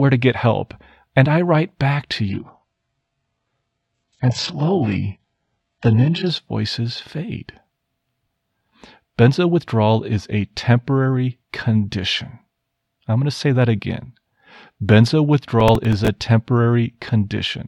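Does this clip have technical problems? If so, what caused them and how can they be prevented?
Yes. From 2.29 to 6.29 s an adaptive stream at a lower bitrate switches abruptly to a thin, swirly sound. On a spectrogram everything above 8 kHz vanishes, which fits a drop to a very low-bitrate stream of around 8 kbit/s. Streaming with a larger buffer or a higher minimum bitrate prevents this.

From 15.60 to 16.08 s there is processor overload crackle. About ten short buffers, each a few milliseconds long, missed their deadlines and replayed stale audio. On a waveform this appears as jagged, hard-edged jumps, and on a spectrogram as vertical streaks. Reducing the CPU load or enlarging the audio buffer prevents it.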